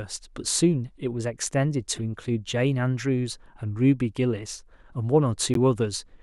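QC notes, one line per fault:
1.96–1.99 s: corrupt frame decoded. A few damaged compressed frames were played anyway, so misplaced energy gives a faint blip of about 36 ms.
5.54–5.57 s: corrupt frame decoded. A few frames with flipped bits decoded to the wrong frequencies. This causes a much louder burst, near -10 dBFS, lasting about 32 ms.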